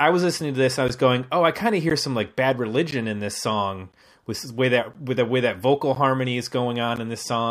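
Gaps between chunks occur at 0.88, 1.90, 2.91, 3.92, 4.94, 5.95 and 6.96 s. The speech was delivered in one-second chunks, and at each join roughly 13 ms of silence separates one chunk from the next. Nothing is lost, but the flow stops briefly every time. Each one sounds like a tiny dropout, and the steady once-per-second repetition gives the speech a rhythmic stutter.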